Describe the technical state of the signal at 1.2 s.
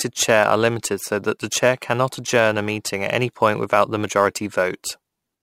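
At 1.2 s the speech carries crude rate conversion, present through the whole clip. Samples were simply repeated with no filtering, which fits a nearest-sample step from 44.1 kHz to 48 kHz. This leaves a gritty, inharmonic fizz about 25 dB down that tracks loud, bright sounds, unlike steady hiss or harmonic clipping.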